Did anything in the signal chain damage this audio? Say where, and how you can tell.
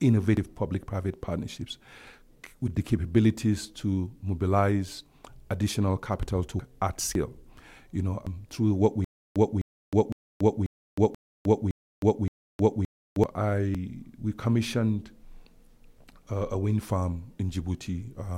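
Yes. Dropped buffers (overrun) at 0.37, 6.60, 7.15, 8.27 (between "you know" and "through what"), 10.12, 11.15 and 13.75 s. Each is a jump where the speech skips ahead by roughly 0.1 to 0.3 s. On a waveform this shows as an abrupt splice, and on a spectrogram as a vertical line. The likely cause is a driver that missed its buffer reads.

Stutter with silent gaps from 9.04 to 13.24 s, at the playback or stream stage. A 257 ms burst repeats seven times, each followed by 313 ms of digital silence, every 570 ms. Identical blocks separated by flat gaps are visible on both displays. The likely cause is a stalled stream replaying its last fragment.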